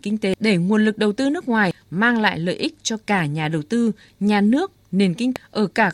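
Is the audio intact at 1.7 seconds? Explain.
No. At 1.71 s there is damaged data in a compressed stream: corrupted bytes make the decoder misread the frame, lose sync and skip to the next valid header, producing a brief chirp or blip in the speech.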